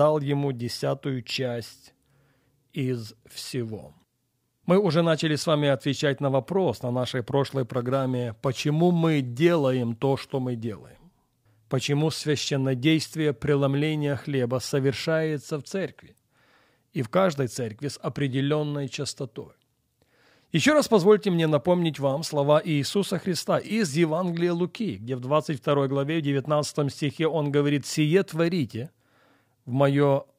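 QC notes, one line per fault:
7.54–11.40 s, crude rate conversion: a gritty, inharmonic fizz rides under the speech, tracking its louder and brighter parts. Samples were picked by nearest position without filtering, which fits a 48 kHz to 44.1 kHz change, leaving patterned error some 35 dB down.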